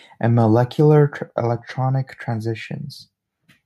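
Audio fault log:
No technical faults can be heard anywhere in this speech recording.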